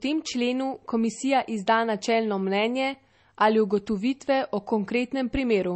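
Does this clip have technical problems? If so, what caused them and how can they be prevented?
Yes. Throughout, the speech stops sharply above 8.3 kHz, a flat empty band on a spectrogram. This is low-bitrate audio saved at a high bitrate, likely a low-rate MP3 re-encoded, so the larger file cannot restore what the first encoding removed. To prevent it, encode from the original source rather than from a low-bitrate copy.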